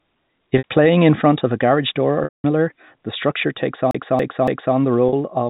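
Packet loss with pitch repetition occurs at 0.58 to 0.64 s, just before "playing in front of", and at 5.09 to 5.13 s. The receiver bridges these 60 ms and 40 ms gaps by repeating the last pitch period, giving a brief held, buzzy tone. At 2.24 to 2.44 s, after "of a garage door", a 200 ms loss outlasts that concealment, so the repeated period fades to silence before the speech cross-fades back in.

From 3.91 to 4.76 s, just after "the structure takes", a CD stuck on one turn replays the same 0.28 s segment three times with a short mute at each jump, producing an even, mechanical stutter within the 4 kHz telephone band.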